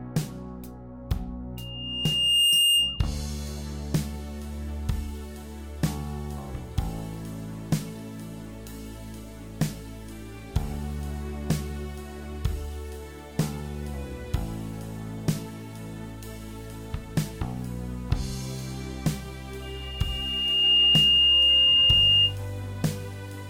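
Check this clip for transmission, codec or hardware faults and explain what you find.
One fault: loudspeaker feedback squeal at 1.57–3.11 s and 19.62–22.36 s. A 2.8 kHz tone swells over about a second, well above the program and louder the second time, as the mic–speaker loop exceeds unity gain. On a spectrogram it is a thin horizontal line brightening at 2.8 kHz, and on the waveform a growing envelope.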